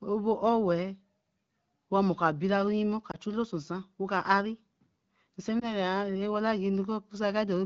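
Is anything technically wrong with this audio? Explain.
Yes. Lost AMR speech frames occur at 3.11 to 3.17 s and 5.59 to 5.75 s. In each case one 20 ms frame fails its checksum, and the decoder repeats the previous pitch and vocal tract settings at falling gain. The result is a brief warble or dip, not the hard silent gap of a plain dropout. The wideband speech around these frames is clear, which fits AMR-WB at about 12.65 kbit/s.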